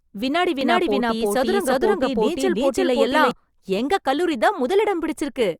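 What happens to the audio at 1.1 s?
At 1.1 s you're inside a doubled audio track that runs from about 0.61 s to 3.31 s. The speech is there twice: a second, full-band copy trails the original by roughly 300 ms at about the same level, so everything gets a hard, flat echo with no room decay. It most likely comes from the signal being picked up again through a slower path. Both the start and the end of the doubling are abrupt.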